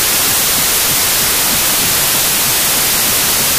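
Loud harsh noise fills the whole clip, the original sound buried beneath it, sped up 1.5 times and raised in pitch: wrong sample width, 16-bit data read as packed 24-bit.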